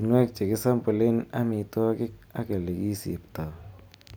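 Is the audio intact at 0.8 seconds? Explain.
Yes, at 0.8 seconds the speech plays through intact, with no dropout, click, distortion or other fault audible at that moment.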